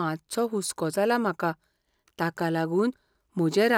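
The speech recording shows no technical faults anywhere in its duration.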